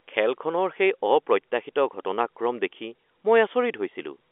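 Nothing goes wrong anywhere in this speech, which just carries the narrow telephone-line sound of G.711 A-law coding, with its band running from 300 Hz up to 3.5 kHz.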